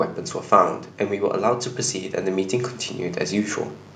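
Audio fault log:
throughout, mains buzz: a steady, raspy buzz sits about 30 dB under the speech, built from switching spikes riding the 50 Hz mains, with harmonics stretching into the kilohertz range.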